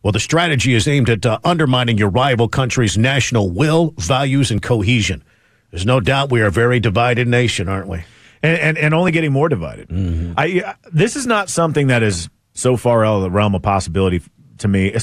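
Speech, with two brief jumps at 4.58 s after "country's national will values" and 9.09 s before "getting more divided", likely dropped buffers (overrun) each losing a few milliseconds.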